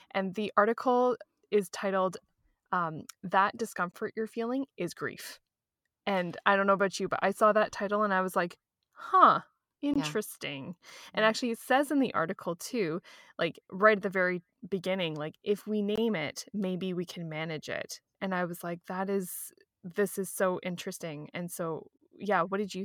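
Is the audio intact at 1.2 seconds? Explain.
Yes, the audio is intact at 1.2 s, with no dropout, click, distortion or other fault at that moment.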